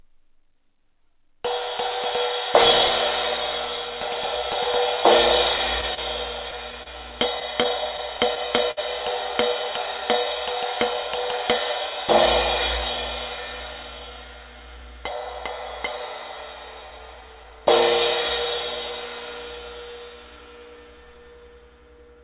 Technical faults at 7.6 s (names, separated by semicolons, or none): scattered short gaps